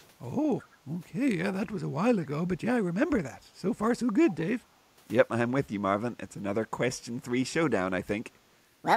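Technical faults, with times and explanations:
0.04–0.08 s, 0.61–0.69 s and 4.3–4.36 s: echo leak. A faint, delayed copy of the voice trails by about 216 ms, barely there at first and much stronger by 4.3 s. Likely the far end's loudspeaker was picked up by its mic and the echo canceller didn't fully remove it.
3.36–3.49 s and 4.6–4.82 s: background gated by the echo canceller. The room tone briefly sags, by about 9 dB and then about 13 dB, for a fraction of a second each time, as the canceller clamps the mic while the loudspeaker plays and then lets go.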